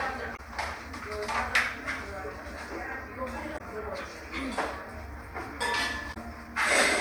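Damaged data in a compressed stream breaks the audio three times: 0.33 to 0.40 s, 3.54 to 3.61 s and 6.10 to 6.17 s. Each lasts about 70 ms. Corrupt bytes make the decoder misread frames and lose sync. Each event sounds like a short squawk or blip.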